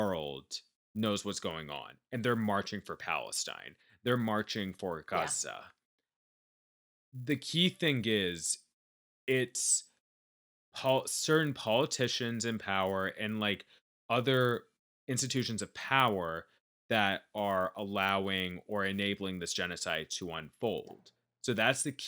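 Throughout, the resampler restarted on every 10 ms block, leaving an error at each edge, heard as a 100 Hz buzz present only during speech.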